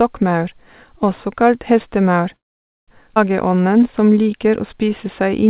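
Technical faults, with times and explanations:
2.36–2.90 s, call audio freeze: Just after "også kalt hestemaur", packets were likely held up in transit and the jitter buffer ran dry. The receiver briefly stretched the last sound, then went silent for about 500 ms. When delivery resumed the speech picked up where it stopped, so a 516 ms gap was inserted and nothing was lost.
3.16–3.18 s, skip ahead: With later audio already queued, a stretch was dropped, either in transit or by the jitter buffer when it overflowed. Roughly a fifth of a second of speech vanishes. Playback jumps forward and the two edges are joined almost directly, with only a tiny 3 ms bridge, so the speech lurches abruptly.
3.48–5.46 s, jitter buffer slow-down: Running short of reserve, the buffer rebuilt it by repeating single pitch periods and slivers of pauses many times over, adding 197 ms. The speech plays at about 90% speed at unchanged pitch, so sounds are drawn out, with a slight warble at times.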